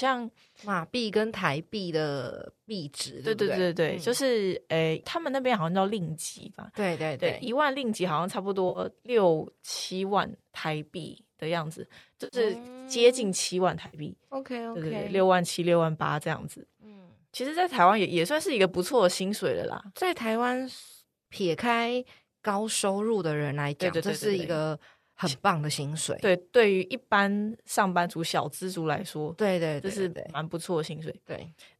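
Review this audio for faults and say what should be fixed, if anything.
AAC frame loss with concealment shows up at 8.69–8.79 s, 12.24–12.37 s and 13.87–13.97 s. Each one is a brief smeared, phasey patch where the decoder bridged missing frames by reusing the last good spectrum. The cause is likely packets from the low-delay AAC stream dropping in transit. Adding forward error correction or a deeper jitter buffer on that link should keep those frames from going missing.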